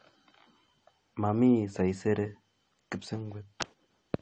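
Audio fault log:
throughout, low-bitrate audio saved at a high bitrate: the speech was likely passed through a heavily compressed encode, its 9 kHz ceiling fitting roughly 32 kbit/s, then re-saved as a far larger MP3. Nothing sounds above 9 kHz, and the re-save cannot restore that missing top.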